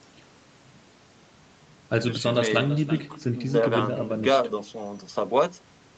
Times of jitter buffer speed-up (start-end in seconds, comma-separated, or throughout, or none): none